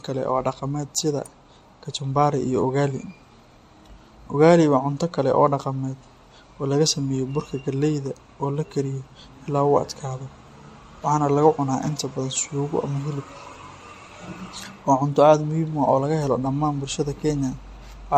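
Throughout the speech there is generation loss: a swirly, smeared, hollow quality with blurred consonant attacks, worse than a single encode would give. It fits repeated MP3 re-encoding, likely around seven passes at about 64 kbit/s, each pass adding fresh quantisation noise and spectral holes on a shifted frame grid.

At 1.26 s an electrical switching spike appears as a sharp, very brief snap laid over the speech, lasting only a few milliseconds. This is likely a nearby switch, motor or static discharge arcing and coupling into the audio line.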